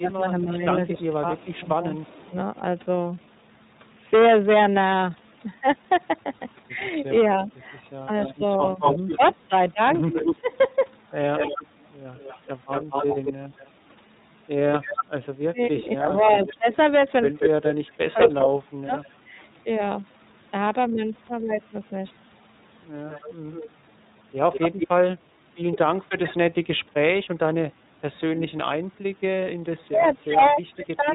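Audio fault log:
Throughout: hard clipping. Peaks overdriven by about 12 dB are cut flat on a small share of samples. This gives crackling fuzz only on loud moments, not a steady hiss.
Throughout: iLBC codec. 30 ms frames are coded independently, and nothing above 4 kHz passes, which fits the 13.33 kbps mode. The sound is muffled and slightly synthetic, unlike clipping's peak-only harshness.
0.01–2.34 s, 7.23–18.92 s, 25.85–31.1 s: speech suppressed in double talk. The level dips by about 10 dB in the first stretch and by up to about 30 dB later, likely from an echo canceller ducking during overlap. Unlike codec loss, the voice itself is turned down.
0.95–2.3 s, 8.25–19.08 s, 23.09–24.88 s: echo leak. A delayed copy returns after 273 ms at about 30 dB down, 230 ms at about 5 dB down, and 193 ms at about 10 dB down. It is likely loudspeaker pickup that the canceller missed, heard as discrete repeats rather than diffuse reverb.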